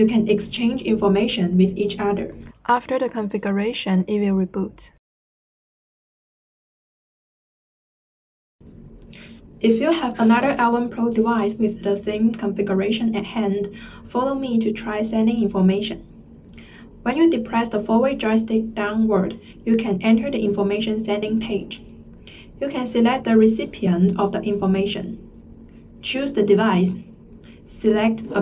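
No technical faults are audible.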